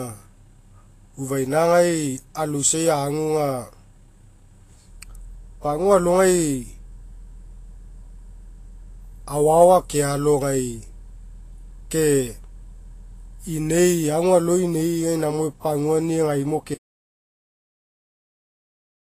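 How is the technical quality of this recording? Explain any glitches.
The recording has plainly audible codec damage throughout and ends in a dropout to silence.

Vorbis compression, throughout: likely low-bitrate Vorbis coding, fitting about 28 kbps, cuts everything above 14.2 kHz and coarsely quantises the treble, leaving the speech hissy, grainy and smeared on consonants.

Audio dropout to silence, from 16.75 s to the end: the input signal is lost, likely through a disconnection or mute, and the speech cuts off mid-flow into silence with no room tone.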